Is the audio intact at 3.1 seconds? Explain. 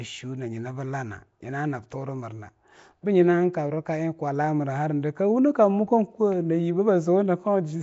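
No. At 3.1 s the speech has a rough, hissy halo and a smeared, underwater quality, with nothing above 7.7 kHz. This runs throughout and is likely Nellymoser compression, whose coarse fixed bit budget leaves weak bands filled with noise.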